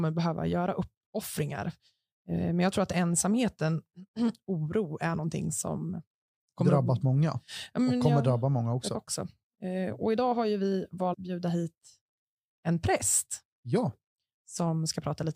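At 8.94 s and again at 11.12–11.15 s, compressed frames are skipped: the decoder drops whole blocks, so the speech jumps ahead by roughly a third and half a second. The skipped frames are 23.2 ms each.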